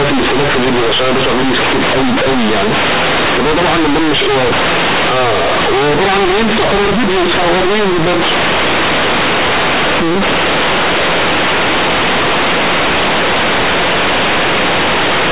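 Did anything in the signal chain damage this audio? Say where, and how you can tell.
Yes, and it's at the sample-format conversion stage: companded audio read as linear, for the whole clip. The speech was coded as G.711 A-law, which is a fine telephone-band encoding on its own. But the bytes are being played as plain 8-bit linear samples with no expansion step. Because A-law packs level logarithmically, every sign flip throws the output across about half its range. Quiet passages come out as loud as peaks, and the pauses fill with harsh noise. The result is a loud, buzzy, mangled waveform from start to finish.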